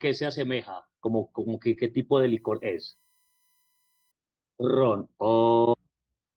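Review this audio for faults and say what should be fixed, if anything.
At 1.73 to 1.75 s the speech turns briefly rougher and noisier for about 20 ms, but there is no gap or dropout. This is a lost packet rebuilt from error correction. One packet was lost in transit, and the next packet carried a low-bitrate copy of it, which the Opus decoder played in its place. That keeps the audio continuous but lowers the quality of that single frame. To prevent it, fix the network path causing the loss, for example by using a wired link or prioritising voice traffic.

From 2.11 to 4.11 s a faint, steady, fixed-pitch whine sits under the speech, very quiet at roughly 45 dB below the signal. Its fundamental is 1 kHz, but it is strongest at 16 kHz, a high harmonic. This is USB whine. The bus's 1 ms frame timing pulls current in regular bursts, and that ripple leaks into the audio through shared power or ground, producing a tone at 1 kHz and its multiples. 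To prevent it, power the audio interface separately or add USB ground isolation.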